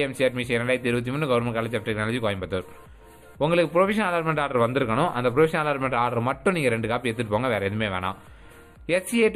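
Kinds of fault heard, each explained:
Channel delay (comb filtering): one channel arrives a tiny fraction of a millisecond late, only a few samples, and when the two are summed their shared content cancels at regularly spaced frequencies. Here the first cancellation falls near 5 kHz, so the upper range sounds hollow throughout. A spectrogram shows a dark horizontal notch band around 5 kHz for the whole clip, with the next notch further up near 15 kHz.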